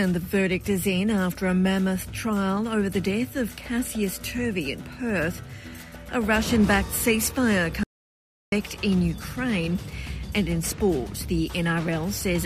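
An audio dropout to silence runs from 7.84 to 8.52 s, about 0.69 s. The sound cuts off abruptly and resumes mid-flow, leaving total silence with no room tone. The input was likely lost briefly while recording continued writing zeros, so that stretch is gone.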